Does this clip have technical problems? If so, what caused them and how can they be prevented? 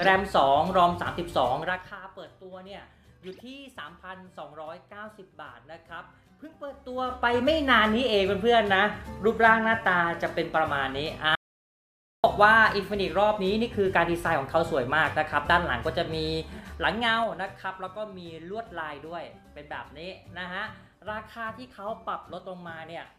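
Yes. Zipper noise: at 1.6–2.0 s, 6.68–7.44 s and 16.44–17.88 s the level moves about 20, 20 and 15 dB in audible 3 dB steps, each one ticking. Ramp gain changes per sample instead of per block.

Audio dropout to silence: from 11.35 to 12.24 s the audio drops to 0.88 s of silence with no room tone, most likely from lost input. Secure connections and watch input meters.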